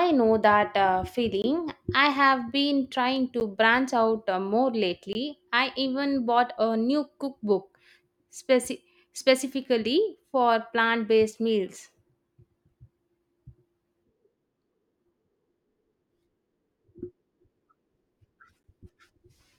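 At 1.42–1.44 s, just after "know that uh", then at 3.40 s, 5.13–5.15 s and 18.63 s, the speech drops into blocks of digital silence of 10 to 20 ms. Each one is a block of silence with no fade, and the 10 ms ones are heard as a tick. On the waveform, each shows as a flat line with abrupt edges. On the spectrogram, each is a blank vertical strip.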